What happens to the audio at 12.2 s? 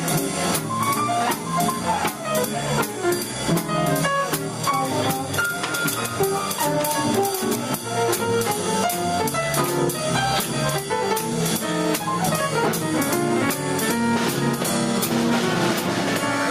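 At 12.2 s there is gain pumping, as through the whole clip. The gain is pulled down by around 10 dB under every loud sound, squashing the dynamics, likely from input gain set far too high with a fast limiter pulling it back.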